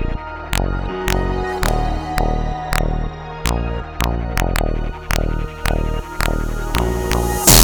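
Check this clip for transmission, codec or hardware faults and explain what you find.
One fault runs throughout: integer overflow. Peaks pushed about 2 dB past full scale, a small fraction of samples, wrap to the opposite extreme, producing violent cracks far harsher than clipping's flattened buzz.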